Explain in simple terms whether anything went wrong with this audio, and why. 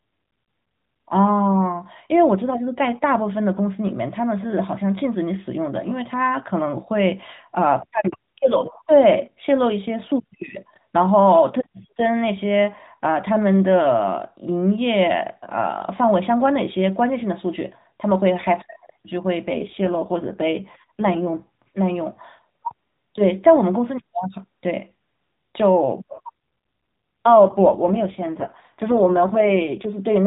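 Two stretches sound worse than the rest: from 19.46 to 21.44 s, and again from 26.14 to 29.93 s. That's an AMR rate drop. This phone-style speech, which never carries anything above 4 kHz, suddenly turns rougher and more buzzy and synthetic. There's no gap and no change in tone width. The codec is spending fewer bits on the voice, likely because a weak radio link pushed it to protect the signal instead. Then it recovers.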